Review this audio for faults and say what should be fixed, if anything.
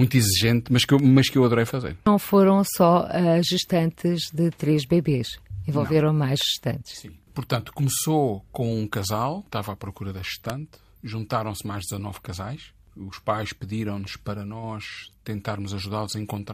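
Three sharp snaps sit on top of the speech at 0.99 s (after "exigente mas que eu", before "mas que eu adorei"), 6.41 s and 10.50 s (after "estava à procura da"), each louder than the last. They are likely electrical switching spikes from nearby switching or static discharge. Keep switches, motors and static sources away from the recording chain, and use shielded, well-grounded cabling.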